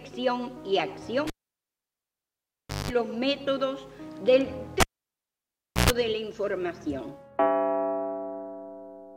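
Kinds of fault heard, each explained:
Cable pulled and plugged in: at 1.27 and 4.80 s a live lead is yanked, giving a pop, near silence for about 1.6 s and then 1.0 s, a brief mains buzz (50 Hz, then 60 Hz) as the tip touches, and a second pop on reconnection.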